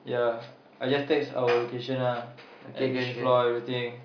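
No audible faults in this speech.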